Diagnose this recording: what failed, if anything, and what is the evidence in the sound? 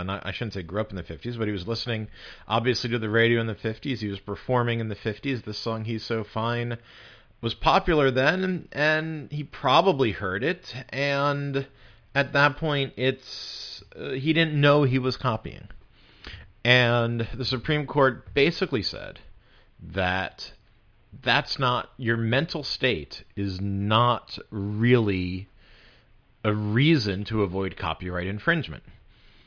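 Nothing in the signal chain has failed, and the speech signal stays continuous and steady in level and timing across the whole recording.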